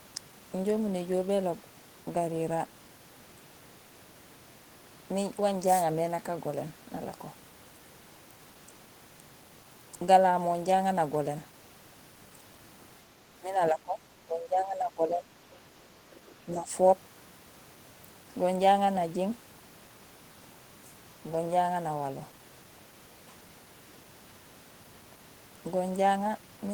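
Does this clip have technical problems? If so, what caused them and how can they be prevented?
Yes. Between 13.4 and 15.32 s the speech sinks and thins in patches adding up to roughly a second and a half, at worst about 15 dB down, with a shorter, shallower dip of about 5 dB from 16.45 to 16.72 s. This is speech suppressed in double talk, most likely because the echo canceller took the near talker for loudspeaker echo while both sides spoke and attenuated everything. Better double-talk detection, or a headset that removes the echo path, would prevent it.

From 16.13 to 16.2 s a brief, faint scrap of the other side's voice leaks through, roughly 30 dB below the speech. This is likely loudspeaker sound reaching the microphone that the echo canceller did not fully subtract, leaving a short residual just before the second suppression dip. A headset, lower loudspeaker volume, or a canceller with stronger residual-echo suppression would prevent it.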